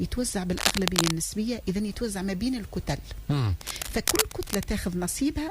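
Scratchy, rustling bursts cut across the audio from 0.57 to 1.12 s, roughly as loud as the sound itself, and again, slightly quieter, from 3.61 to 4.72 s. This is cable scratch noise, likely from a worn lead or connector being moved.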